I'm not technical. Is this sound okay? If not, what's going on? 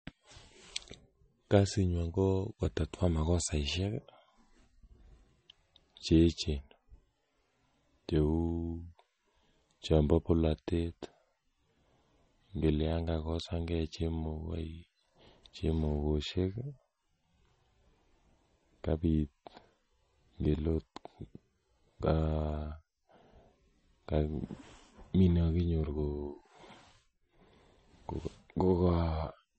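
No. The speech has most likely been squeezed too hard by MP3 compression, which throws away detail it judges unimportant. Everything above 8.4 kHz is gone, so the sound is dull and muffled, and it turns watery and swirly throughout the clip, with metallic chirps on s sounds.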